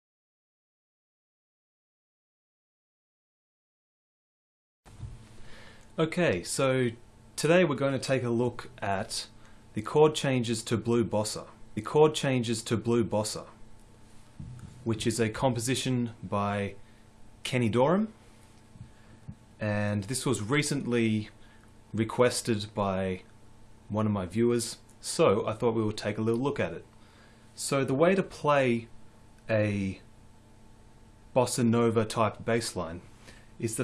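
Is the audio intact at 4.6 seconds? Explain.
Yes, the audio is intact at 4.6 seconds, with no dropout, click, distortion or other fault audible at that moment.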